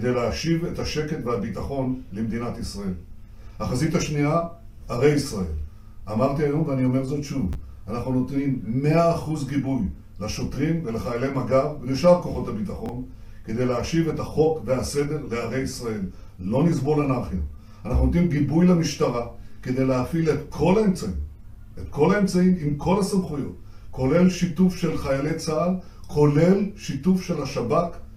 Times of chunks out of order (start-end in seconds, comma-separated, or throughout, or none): 7.53, 12.86-12.89